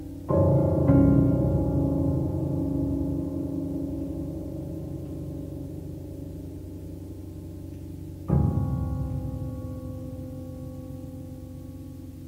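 No faults are audible anywhere in this clip.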